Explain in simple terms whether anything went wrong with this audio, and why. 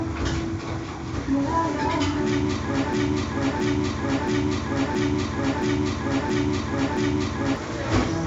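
Yes, something went wrong. Partway through, the player or stream most likely stalled and kept resending the last chunk of sound it held, a fault called a broken-record loop. From 2.93 s to 7.56 s, the same piece about 0.67 s long repeats seven times back to back, like a skipping record. Whatever sound should have played during those four and a half seconds is gone.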